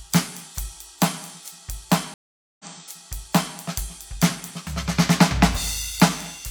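At 2.14 s the music drops out for about 0.45 s in a stream reconnect: the decoder restarts and playback resumes roughly 0.98 s earlier, replaying a passage.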